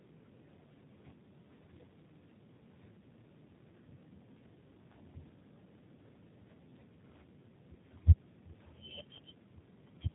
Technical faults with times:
0.00-10.14 G.729 codec

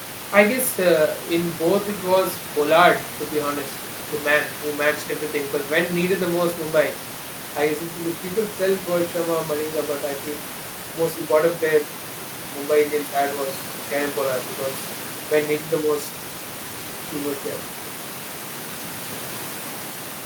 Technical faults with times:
none

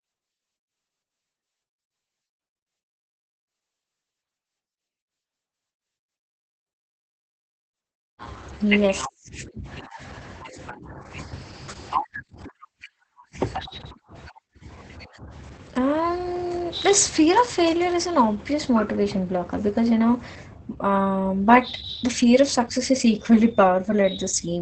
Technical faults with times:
0.00-24.61 Opus voice compression

